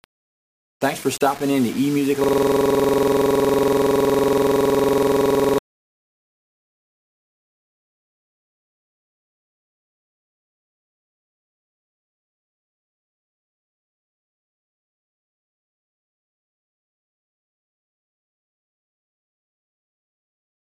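Grainy distortion runs through the whole clip and shifts as the sound changes, with a noise floor roughly 25 dB below the signal. The likely cause is low bit depth without dither, around 5 bits with rounding. From 2.24 s to 5.58 s a system hang loop takes over. One 46.44 ms piece repeats exactly, giving a buzzing stutter at 21.5 Hz, which fits a 2048-sample buffer.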